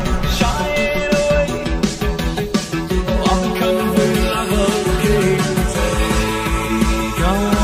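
Throughout, channel delay of about 5 ms causes comb filtering: regular notches from about 100 Hz up sound hollow, showing as fixed horizontal spectrogram stripes.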